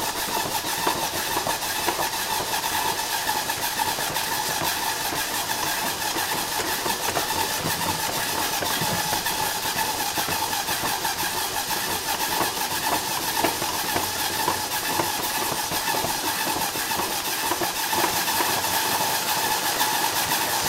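A doubled audio track appears at 17.93 s and runs to the end of the clip: a second, full-band copy of the sound enters abruptly and trails the original by roughly 400 ms at about the same loudness, with no decay or room colour to suggest a natural echo. The likely cause is the same signal being captured again through a slower path, or an edit that leaves two copies out of step.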